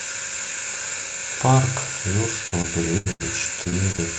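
Speech clip with repeated packet loss, heard as a robotic sound. From 2.47 to 3.22 s, four holes up to 81 ms are patched by stretching the last sound. That covers about 30% of the span. Shorter holes up to 24 ms return from 3.64 to 4.00 s.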